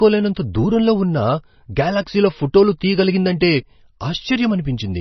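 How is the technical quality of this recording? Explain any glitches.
Poor: heavy codec damage runs through the whole speech clip. Throughout, nothing sounds above 6 kHz and the sound is watery and swirly, likely MP3 compression starved of bits, fitting roughly 24 kbps. Weak frequency lines flicker between frames, which a plain low-pass filter wouldn't cause.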